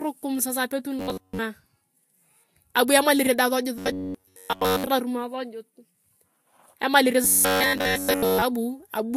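Throughout the clip, the speech was likely first squeezed through a low-bitrate encoder and then saved again as a high-bitrate MP3. That is low-bitrate audio saved at a high bitrate. The second pass cannot restore what the first discarded, so nothing sounds above 16.6 kHz, and the earlier encoder's artefacts stay in the speech. The character fits a Vorbis stream at around 49 kbit/s, under a large MP3 wrapper that adds almost nothing.

From 0.99 to 1.39 s, right after "sasa apetun", then from 3.78 to 4.87 s and again from 7.24 to 8.42 s, new audio stops arriving in time. The player likely loops its last short buffer to fill the gap. This is robotic sound from repeated short buffers. The loop imposes a fixed 93.8 Hz buzz, which fits a buffer of about 10.7 ms. The speech becomes a rigid metallic drone that only loosely tracks the syllables. The first and third stretches are looped throughout, and the middle one mostly.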